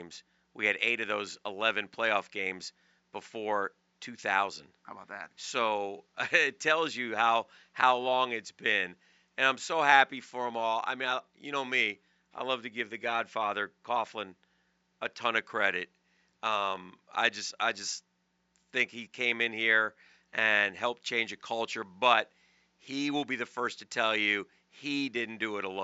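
No technical faults can be heard anywhere in the recording. A faint room noise sits in the background, about 49 dB below the speech.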